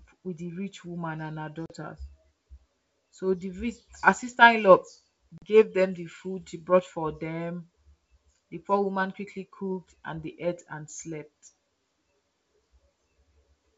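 At 1.66 to 1.71 s and again at 5.38 to 5.45 s, packet loss on an ADPCM call cuts about 40 ms of this wideband speech, likely a couple of packets each time. The waveform shows flat silent gaps with sheer edges, and the spectrogram shows blank vertical strips. The decoder's predictor and step size then mismatch the sender's, so speech resumes with brief distortion.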